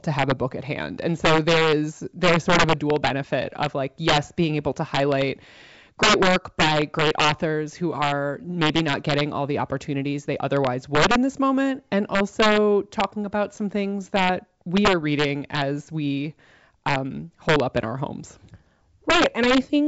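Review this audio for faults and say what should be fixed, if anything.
Integer overflow runs through the whole speech recording. The gain pushes peaks about 4 dB past full scale, and about one sample in a hundred wraps to the opposite sign. Loud moments crack sharply, much harsher than clipping, over G.722 wideband coding that adds only faint damage. Clamp the sum or gain stage so it saturates instead of wrapping, and leave a few dB of headroom.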